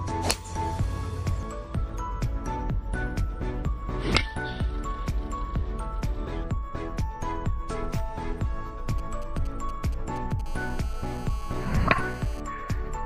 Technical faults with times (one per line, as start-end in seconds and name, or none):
8.90-10.41 GSM signalling bursts
10.46-12.40 GSM phone buzz